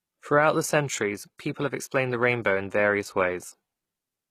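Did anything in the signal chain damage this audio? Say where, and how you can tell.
Yes. Throughout, s sounds turn gritty and lispy and the treble stays bright without matching the harmonics below; that points to codec damage, likely HE-AAC compression near 20 kbps. Unlike a plain low-pass, the top end is present but synthetic.

At 1.38 s there is pre-echo: a 14 ms hiss ahead of an attack, from codec block noise spilling backwards. A click would sit on the transient instead.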